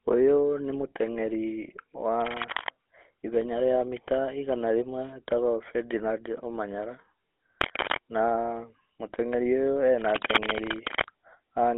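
Throughout the clip the speech carries the character of the GSM full-rate codec. The excitation is rebuilt from sparse, regularly spaced pulses driving a vocal-tract model, which gives a plainly audible buzzy, gravelly roughness. The line band runs roughly from 250 Hz to 3.4 kHz, and nothing reaches above 3.8 kHz, so the sound is thin and narrow. That combination fits a 13 kbps GSM full-rate link.

From 7.61 to 7.98 s, and again from 9.91 to 11.05 s, dense, irregular bursts of scratching and rustling ride over the speech at about the same level as the speech itself. This is cable scratch noise, likely from a worn cable, connector or control being moved so that its contact resistance fluctuates rapidly and injects noise into the signal. The second burst is the longer, lasting just over a second.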